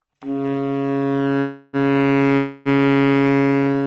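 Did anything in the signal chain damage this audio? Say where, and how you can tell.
Yes, at the network and jitter-buffer stage: two call audio freezes, 1.39–1.76 s and 2.37–2.68 s. Late packets likely drained the buffer, so the receiver stretched the last sound into a fading buzz, which appears on a spectrogram as smeared horizontal streaks, before the audio resumed intact, pushed back by about 340 ms and then 280 ms.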